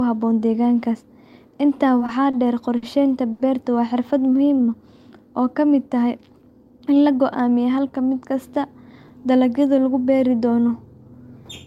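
A speech recording that suffers from a struggling jitter buffer. Between 2 and 3.4 s, four packets arrive late, each one draining the buffer so the receiver has to hold the last sound until the packet shows up and then continue from the same point. These short stalls from late packets sit at 2.06–2.10 s, 2.30–2.35 s, 2.77–2.84 s and 3.32–3.41 s, with fills growing from 20 ms to 30, 50 and 70 ms. Each one freezes a sound for a moment with a faint buzz or dip, though nothing is lost. Next the buffer runs low or has just raised its target delay, and the receiver builds up reserve with a jitter buffer slow-down from 4.20 to 4.63 s. It repeats single pitch periods over and over, adding 53 ms, so the speech plays at 89% speed with unchanged pitch and sounds drawn out, perhaps with a slight warble. Later the buffer overshoots its target, as happens when delayed packets land together, and the receiver trims it with a jitter buffer speed-up from 6.64 to 7.09 s. 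It cuts out about 70 ms in small pitch-period slices, and the speech runs at 114% speed at the same pitch, sounding briefly hurried.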